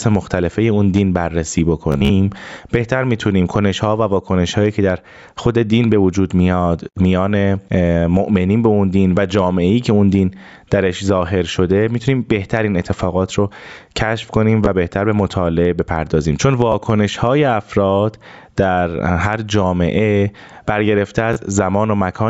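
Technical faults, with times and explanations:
Throughout: gain pumping. The gain swings by about 15 dB. Loud and soft passages sit close in level. The likely cause is gain set far too high, with a fast limiter pulling it down.
1.92–2.10 s, 14.66 s, 16.72 s, 21.33–21.36 s: Bluetooth stutter. Brief slices repeat where data went missing. The first event is the worst, with about 116 ms lost across 174 ms. Its longest repeat run lasts about 44 ms and gives a short buzz. The sound then resumes further on, as if it had kept playing.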